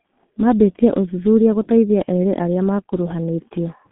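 G.723.1 codec damage runs through the whole speech clip. Long 30 ms frames and a slowly updated voice model, consistent with a rate near 6 kbit/s, leave the speech muffled and hoarse with smeared consonants, confined to roughly 150 Hz to 3.5 kHz, with nothing above 3.8 kHz.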